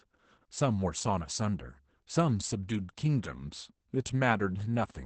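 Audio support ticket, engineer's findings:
Opus voice compression, whole clip. Speech muffled and slightly hoarse, with a faintly robotic edge. Codec damage plainly audible throughout. Nothing above 8.6 kHz: band cut to wideband. Low bitrate forces coarse coding of the excitation. Roughness and cut-off fit the SILK linear-prediction coder at around 12 kbps with 20 ms frames. Probable component: encoder bitrate setting.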